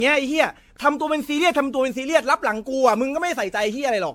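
Throughout, the speech is swirly, hollow and smeared with blurred attacks, worse than a single encode explains: generation loss, likely from about ten AAC re-encodes.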